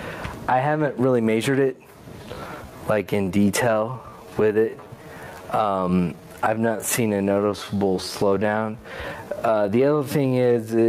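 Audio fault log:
throughout gain pumping: the gain ducks under each loud sound by around 15 dB, likely from a fast limiter on overly high gain; the waveform envelope looks flattened.
2.18–10.88 s time-stretched section: the pace slows to 0.72x with unchanged pitch and drags, likely because short segments were repeated.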